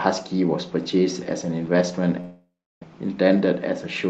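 A long network dropout runs from 2.20 to 2.84 s in this speech, likely from packets that never arrived. The last sound smears into a fading buzz, then 0.33 s of near silence. Speech resumes with its timing shifted by about a tenth of a second, with half a second lost.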